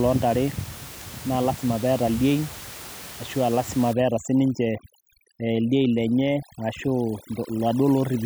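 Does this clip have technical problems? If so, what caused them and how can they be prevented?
Yes. From 3.93 s to the end at 8.25 s, the background drops and breaks up into twinkling specks. This is overdone noise removal. Frequency bands close to the estimated noise level are pushed almost to nothing, and quiet parts of the speech are lost with them. The target was room noise sitting about 17 dB below the speech. To prevent it, use a gentler reduction setting that leaves a little of the room noise in place.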